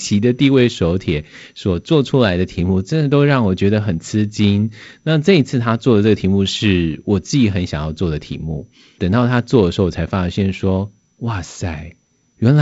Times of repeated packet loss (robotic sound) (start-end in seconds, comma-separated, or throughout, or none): none